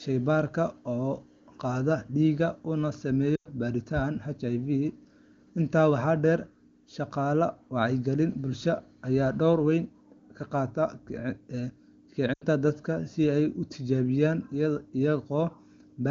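A brief smeared, fading stretch interrupts the speech at 3.36 to 3.48 s and again at 12.33 to 12.44 s. These are lost AMR speech frames: over roughly 100 ms and 80 ms, which fits five and four 20 ms frames, the wideband decoder repeated its last good settings at falling gain.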